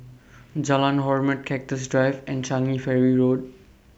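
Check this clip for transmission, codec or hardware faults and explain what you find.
No faults are audible.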